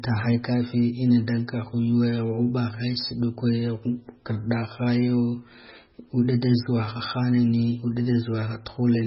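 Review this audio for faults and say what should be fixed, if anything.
MP3 compression damage runs through the whole clip: nothing survives above 5.5 kHz, and the speech sounds watery and swirly with smeared consonant attacks. This is likely heavy MP3 encoding at a very low bitrate, around 16 kbps, where bit starvation cuts the treble and drops weak frequency content. To prevent it, keep an uncompressed or lossless master and use a much higher bitrate if MP3 is required.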